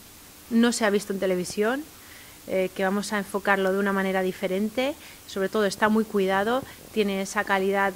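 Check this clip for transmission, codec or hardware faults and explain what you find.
No transmission, codec or hardware faults turn up when checking this clip.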